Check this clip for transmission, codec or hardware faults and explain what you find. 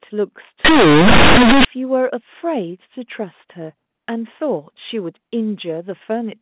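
One fault is audible in this speech, from 0.65 to 1.65 s, against the 4 kHz ceiling of the G.711 mu-law telephone band.

Companded audio read as linear: mu-law bytes are played as plain 8-bit samples without expansion, so quiet passages swing over about half the range. The waveform becomes a blocky, clipped-looking slab, and the spectrogram fills with broadband noise even in pauses. It sounds loud and harshly buzzy.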